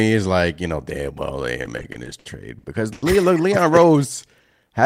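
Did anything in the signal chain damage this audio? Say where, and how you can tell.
Yes. The network stage caused repeated stalls (stutter) from 1.63 to 3.03 s, just after "know damn well they". Packets arrived late or slower than playback, so the jitter buffer ran dry nine times, the longest gap about 90 ms. Each time the receiver stretched the last sound to bridge the wait, about 280 ms in all, roughly a fifth of that stretch. Nothing is lost, but the speech drags and catches in a halting stutter.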